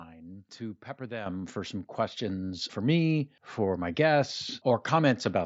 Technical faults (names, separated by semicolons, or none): microphone volume stepped up; concealed Bluetooth headset packet loss